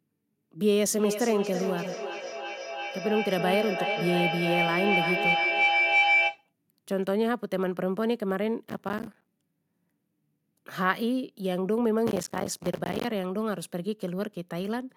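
From 0.85 s to 6.52 s a piercing tone near 2 kHz swells over the speech, peaking at about 3 dB louder than the talker and pulsing roughly every 300 ms. This is a feedback howl: two devices in the same room are on the call, so the sound circles from loudspeaker to microphone, gaining on each trip and narrowing to the frequency the loop favours. The pulse marks each round trip.

From 8.66 s to 9.28 s, and again from 12.07 s to 13.05 s, the speech is shredded by a burst of gritty crackle made of tiny hard-edged dropouts. This is processor overload crackle. The processor could not finish its audio buffers on time, and each missed one was filled with silence. The spacing of the clicks fits buffers of around 5 ms, with many more missed in the longer second burst.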